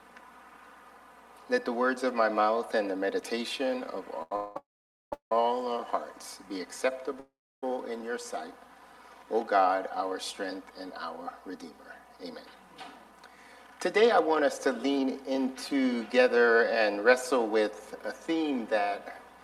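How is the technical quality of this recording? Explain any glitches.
The recording has network playback glitches: a brief stall, a run of freezes around 4 to 5 seconds and near 7 seconds, then a late speed-up.

Short stall from a late packet, 4.22 to 4.32 s: a packet arrived late, so the receiver held the last sound for about 86 ms, giving a stretched moment with a slight buzz or dip before resuming.

Call audio freeze, 4.36 to 5.32 s in three linked stretches, and 7.20 to 7.63 s: the sound trails off into a fading buzz or hiss and then silence, about 490 ms of it in the longest stretch and about 320 ms at 7.2 s, before resuming where it stopped. The likely cause is delayed packets draining the jitter buffer.

Jitter buffer speed-up, 12.24 to 19.42 s: with delay built up, the receiver trimmed tiny pitch-period slices to catch up, roughly 0.7 s in total. The audio runs at 108% speed, sounding hurried at unchanged pitch.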